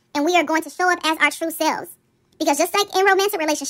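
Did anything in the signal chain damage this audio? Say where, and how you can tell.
Yes: a wrong sample rate at playback affects the whole clip. The speech runs 1.5 times too fast and about 7 semitones high, with speed and pitch shifted together. That ratio fits audio recorded at 32 kHz and clocked out at 48 kHz without resampling.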